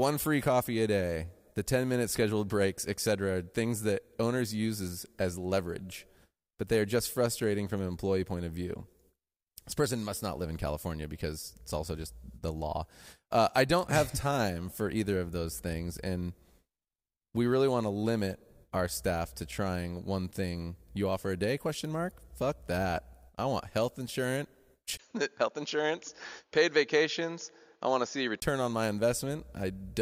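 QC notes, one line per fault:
24.97–28.42 s input switched to a poorer device: capture likely jumped to a narrower-band input, so after a 20 ms gap nothing above 6.9 kHz remains and faint new background noise appears, dulling the speech.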